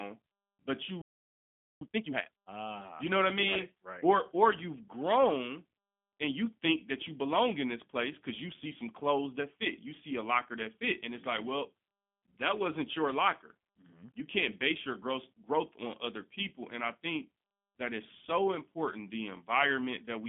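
Speech carried through the G.729 codec at 8 kbit/s rebuilds each frame from a filter and sparse pulses, so nothing passes above 3.5 kHz and the sound is plainly rough and synthetic throughout. At 1.01 s a playback stall, likely the player running out of data, silences the output for about 0.79 s until it resumes at 1.81 s. From 1.81 to 2.59 s a time-compressed catch-up cuts and cross-fades small pieces to clear the backlog, so the speech runs at double speed at normal pitch.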